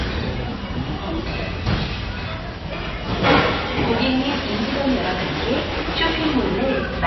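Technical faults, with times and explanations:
Throughout, MP3 compression: nothing is heard above 5.8 kHz, and a plainly audible watery, swirling texture runs through the audio as weak frequency components flicker on and off between frames. This is likely a bit-starved MP3 encoder, consistent with a bitrate near 24 kbps.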